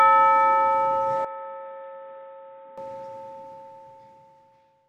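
From 1.25 to 2.78 s the sound turns dull and about 5 dB quieter, with faint added background noise; likely an input switched to a poorer device, spectrogram empty above 3.8 kHz.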